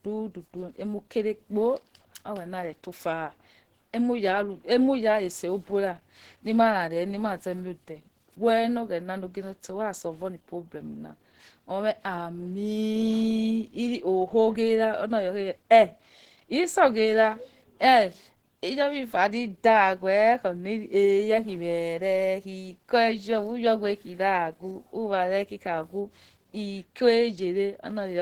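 Throughout, the speech sounds hoarse, grainy and muffled, with plainly audible roughness; the likely cause is Opus compression in hybrid mode, which fits about 16 kbps.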